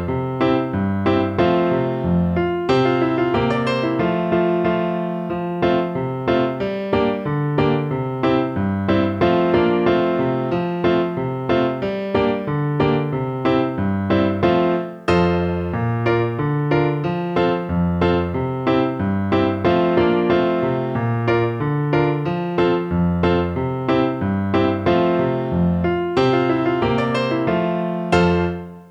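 No technical faults are audible anywhere in the recording.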